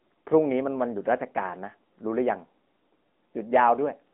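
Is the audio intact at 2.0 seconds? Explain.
No. At 2.0 s, as across the whole clip, the speech carries AMR narrowband mobile codec damage, with a buzzy, synthetic edge that fits a mid-rate mode near 10 kbps. A spectrogram shows energy confined to roughly 200 Hz–3.4 kHz and nothing above 3.8 kHz.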